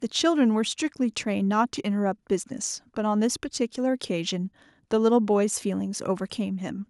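Nothing in this speech recording stands out as a technical fault, so there's nothing here to flag.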